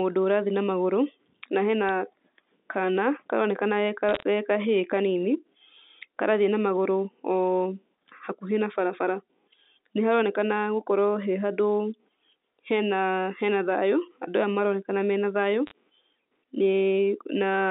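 Speech over a G.711 phone line, band-limited to roughly 200 Hz to 3.7 kHz, with bit errors on a digital phone line: a tick at 1.89 s right after "na hena", then short crackly bursts at 4.09 to 4.23 s and 15.67 to 15.71 s, where flipped bits corrupted individual samples.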